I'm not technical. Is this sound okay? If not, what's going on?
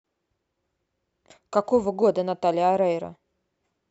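Yes, nothing stood out as a problem when listening to this speech recording.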